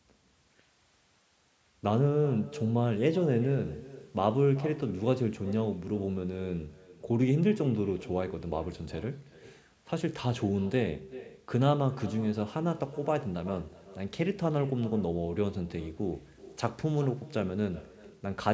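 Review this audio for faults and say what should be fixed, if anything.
Echo with no canceller runs through the whole clip. The far end's loudspeaker feeds its microphone, and nothing removes it. The speech returns roughly 0.4 s later, thinner, about 18 dB down. Far-end echo cancellation or headphones would prevent it.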